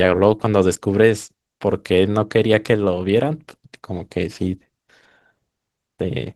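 From start to finish the speech carries Opus voice compression. Its hoarse, slightly robotic quality and coarsely rendered highs fit hybrid mode near 16 kbps. Unlike a plain low-pass, the top band persists, but thinly rebuilt rather than dulled away.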